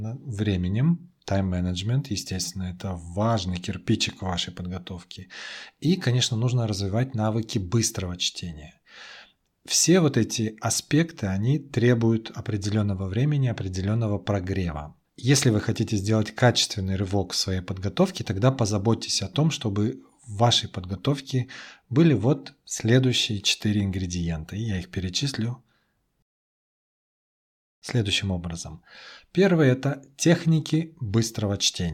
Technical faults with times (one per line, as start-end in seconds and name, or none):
26.22-27.82 rebuffering stall